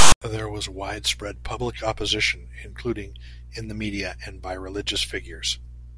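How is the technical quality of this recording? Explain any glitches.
The speech opens with one glitch. From 0.00 to 0.22 s there is a harsh, lopsided rasp that stops dead into silence: file tags played as audio, where tag text and zero padding were decoded as samples.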